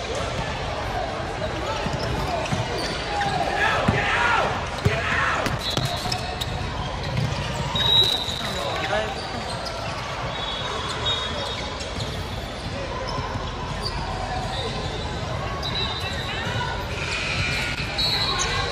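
Loose connector crackle breaks up the audio three times: from 5.47 to 6.22 s, from 8.04 to 8.65 s, and from 17.51 to 17.87 s. Each burst is an irregular spray of crackle and scratching laid over the signal, the result of a worn or dirty contact in the cable path intermittently opening and closing as it moves, chopping the signal and throwing pops from any DC present on the line.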